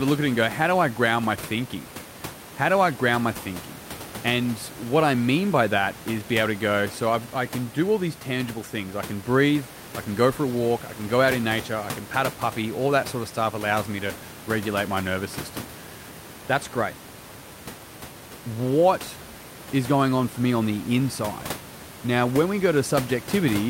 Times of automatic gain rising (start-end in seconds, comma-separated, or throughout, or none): none